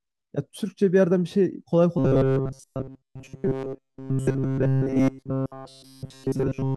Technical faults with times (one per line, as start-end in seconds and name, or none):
1.98-6.76 robotic sound from repeated short buffers